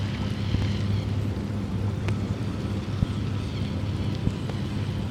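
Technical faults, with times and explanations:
0.54–0.65 s, loud pop: two sharp pops, about 20 dB above the sound, which continues underneath; likely a voltage pulse from a plug, switch or static entering the signal.
2.09–2.11 s, loud pop: a single sharp pop about 15 dB above the sound, likely a brief electrical spike added to the signal path.
3.03–3.05 s, loud pop: a single pop about 15 dB above the sound, which carries on beneath it; likely a static discharge or switching transient.
4.27–4.52 s, loud pop: two pops about 15 dB above the sound, spread over a quarter second; likely repeated voltage steps, such as from a plug or switch.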